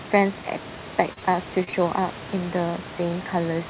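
Speech heard through a narrowband call path, band-limited at 4 kHz with room noise about 16 dB down, shows short concealed packet loss in two back-to-back pairs: 1.13–1.19 s and 1.19–1.25 s, then 1.64–1.70 s and 1.70–1.76 s. Each gap is about 30 ms of missing audio that the receiver bridged by extending the preceding sound, leaving brief smeared or wobbling patches.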